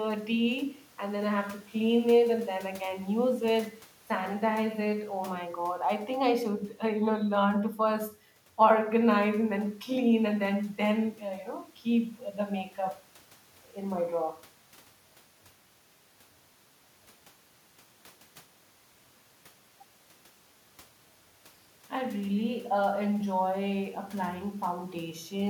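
Listening through this speech recording, nothing stood out as a technical problem.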